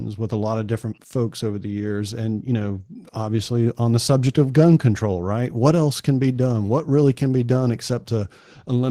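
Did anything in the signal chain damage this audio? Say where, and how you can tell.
Yes. Opus voice compression throughout, at the codec: coarsely coded excitation makes the speech hoarse and slightly robotic, which points to hybrid SILK-plus-CELT mode around 16 kbps.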